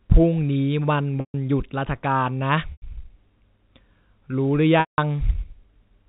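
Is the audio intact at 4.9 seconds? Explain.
No. From 4.80 to 4.98 s the sound briefly holds with a buzzy, frozen quality, fades to silence, then cross-fades back. This is packet loss with pitch repetition: about 180 ms went missing, consistent with nine 20 ms packets, and the receiver looped the last pitch period to fill the gap.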